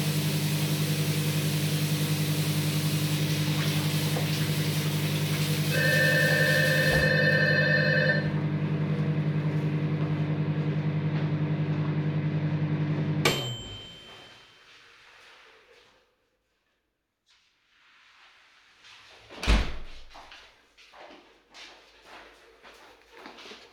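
No technical faults are audible anywhere in this audio.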